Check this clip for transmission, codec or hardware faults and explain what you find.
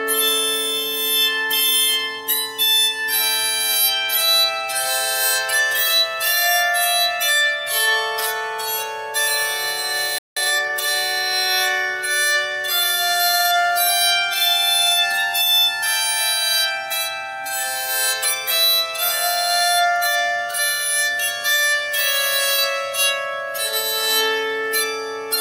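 Two linked faults sit just past the ten-second mark: a playback stall followed immediately by time-compressed catch-up.

From 10.18 s to 10.37 s the output goes silent for about 180 ms, a playback stall. The likely cause is the player running out of buffered data or having its audio thread blocked, so nothing reaches the output until it recovers. What you hear is the sound cutting off in mid-flow, then resuming after the gap.

From 10.37 s to 10.73 s comes time-compressed catch-up. To clear the backlog left by the stall, the player cuts small pieces out of the signal and cross-fades the joins, running at 1.5 times normal speed. The result is audio that sounds hurried for about a third of a second while its pitch stays unchanged.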